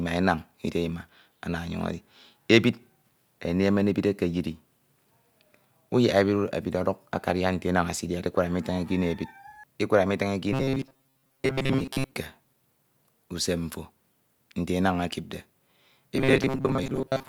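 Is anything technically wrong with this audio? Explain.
Yes. From 10.53 to 12.13 s and again from 16.17 to 17.28 s, the speech turns into a rigid metallic buzz fixed at 133 Hz, loosely following the words: robotic sound from repeated short buffers. Likely, audio arrived too seldom, so a roughly 7.5 ms slice was looped repeatedly, replacing most of the real signal.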